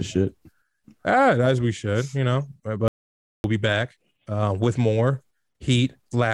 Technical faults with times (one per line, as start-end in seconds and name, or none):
2.88-3.44 audio dropout to silence